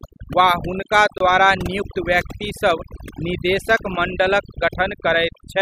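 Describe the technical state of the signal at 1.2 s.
A brief hole of silence, about 24 ms, opens in the speech from 1.18 to 1.20 s. Its edges are smeared, and the sound resumes where it stopped, just before "द्वारा नियुक्त व्यक्तिसभ निदेशक". This is a gap at a join of encoded pieces: two separately encoded segments were butted together untrimmed, so the encoder's start-up delay and end-frame padding remain as silence.

Around that moment the background is also dropped low, flecked with twinkling specks. That is overdone noise removal, present throughout: the noise reduction was set too hard, pushing individual frequency bands down or off whenever they neared its noise estimate and taking quieter parts of the voice with them.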